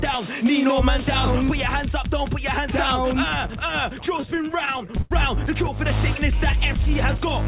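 From 4.06 to 5.13 s the audio drags and catches over and over, with short held or smeared sounds, the longest near 88 ms, filling about a fifth of that stretch. These repeated stalls (stutter) come from the jitter buffer running dry as packets arrive late, so the receiver stretches the last sound until data resumes.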